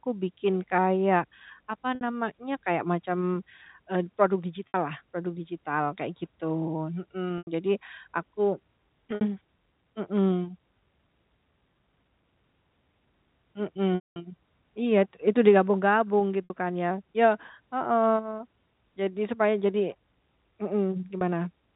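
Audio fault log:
1.95–2.01, 4.68–4.74, 7.38–7.47, 9.15–9.21, 13.95–14.16, 16.44–16.50 (just before "kan ya"), 21.18–21.21 s: packet loss with pitch repetition. Gaps of 30 to 90 ms are filled by a repeated last pitch period, giving a brief buzzy held tone rather than a silent dropout; the 210 ms loss fades to silence, then speech cross-fades back.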